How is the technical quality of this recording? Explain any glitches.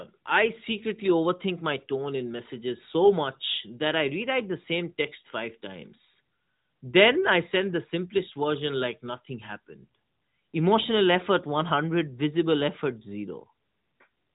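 There are no glitches to explain; the speech runs without dropouts, clicks or distortion events. It comes through an AMR narrowband mobile codec, so nothing above about 3.8 kHz is present and the light coding texture fits the codec's 12.2 kbps mode.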